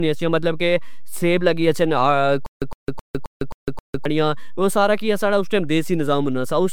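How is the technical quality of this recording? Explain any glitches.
The technical quality is poor: the speech carries a constant DC offset, a smeared, hollow codec character from start to finish, and a stuttering stretch in the middle.

DC offset runs through the whole clip. Somewhere in the capture or processing chain a constant was added to the signal, so the waveform sits off the zero line instead of centred on it. You don't hear this directly, but it eats into headroom and appears as steady energy at the very bottom of the spectrum, which also makes any hard edit or start point prone to a click.

Generation loss is also present throughout. The speech sounds swirly and hollow, consonant attacks are blurred, and nothing is left above 19.9 kHz. The likely cause is repeated MP3 encoding at 128 kbit/s, decoded and re-encoded several times over. Each pass quantises again on a shifted frame grid, so noise and spectral gaps pile up beyond what a single 128 kbit/s encode would produce.

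Stutter with silent gaps occurs from 2.46 to 4.05 s, just after "کہ سیب لگی گچھن" and before "او سارا کج ساڑا". The likely cause is a player or stream stalling and, on each retry, replaying its last buffered fragment before running dry. A 110 ms burst repeats six times, separated by about 155 ms of digital silence, giving an even 265 ms rhythm. The speech that should have filled that span is lost.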